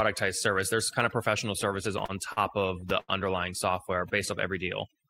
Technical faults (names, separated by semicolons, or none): overdone noise removal; repeated stalls (stutter)